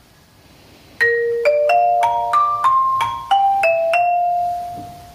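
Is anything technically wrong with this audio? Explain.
Yes. Gain pumping runs throughout the clip. The level is pulled down as each loud sound arrives, swinging by something like 10 dB. The likely cause is input gain set far too high, with a fast limiter or compressor clamping down on every peak and releasing in the pauses. The result is squashed audio: loud and soft passages sit unnaturally close in level.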